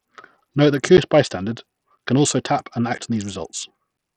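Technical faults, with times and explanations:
Throughout: Bluetooth SBC compression is the likely cause of the dull, flickering treble and gritty grain in the speech; the heavy damage fits a low bitrate around 64 kbps.
0.97 to 3.98 s: periodic USB or driver dropouts leave about four evenly spaced ticks, one per second, where roughly 10 ms of audio is replaced by silence.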